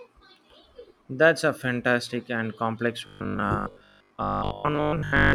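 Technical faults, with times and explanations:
3.07 s to the end, robotic sound from repeated short buffers: after "a fantastic and complex" the speech becomes a rigid, metallic 50 Hz buzz that loosely follows the words. The likely cause is 20 ms chunks being replayed while late-arriving audio is mostly skipped.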